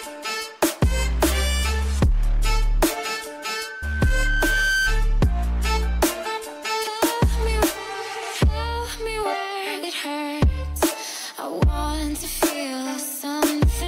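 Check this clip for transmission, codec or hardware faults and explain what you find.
There's one hardware problem, a loudspeaker feedback squeal. From 3.39 to 5.01 s a 1.5 kHz tone swells over about a second and a half to roughly the level of the surrounding sound, because the mic was picking up its own speaker and looping.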